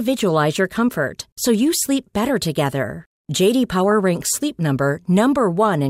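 It's a speech clip with a brief burst of DAB burbling at 3.92 s, where weak-signal bit errors, around 0.15 percent, corrupted some MP2 sub-bands.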